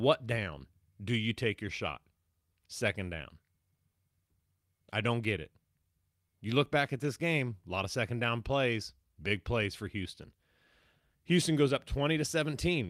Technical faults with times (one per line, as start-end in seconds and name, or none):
none